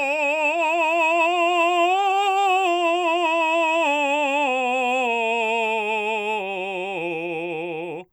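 No faults are audible anywhere in this music clip.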